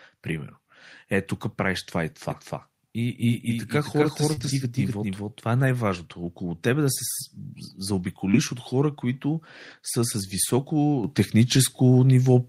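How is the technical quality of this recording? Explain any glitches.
The recording has several network and capture faults: a doubled track, brief packet-loss patches, rougher rebuilt stretches, and a sudden level jump near the end.

From 2.31 to 5.40 s there is a doubled audio track. A second, equally loud full-band copy trails about 0.3 s behind, likely from a second capture path or a misaligned edit. Unlike room echo it has no decay or reverberant colour, and it starts and stops abruptly.

Short concealed packet loss occurs at 4.33–4.39 s and 8.31–8.35 s. In each case a few hundredths of a second of audio never arrived, about 40 ms and 20 ms, and the decoder extended the preceding sound to fill the hole. It is heard as a brief smear or wobble rather than silence. Unlike error-correction repair, it is guesswork, not a copy of the lost audio.

Lost packets rebuilt from error correction appear at 4.37–4.51 s (80 ms, which fits four 20 ms packets), 5.57–5.67 s (60 ms) and 8.33–8.35 s (20 ms). 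Here the decoder played low-bitrate copies carried in later packets, so nothing drops out. Those stretches sound grainier, unlike concealment's smeared continuation.

At 11.04 s the microphone volume is stepped up by about 8 dB. The call software raised the input gain in one move, so the sound and background noise jump together. That shared, instantaneous step distinguishes it from someone simply moving closer to the microphone.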